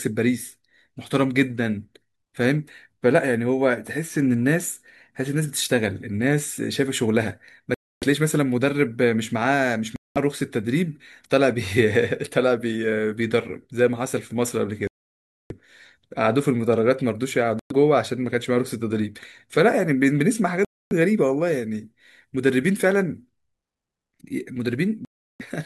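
Speech drops into dead silence six times, at 7.74, 9.96, 14.87, 17.59, 20.65 and 25.05 s, for between 0.11 and 0.63 s each, then resumes. This is likely a Bluetooth stall, where delayed packets left the headphone buffer empty until resent audio arrived.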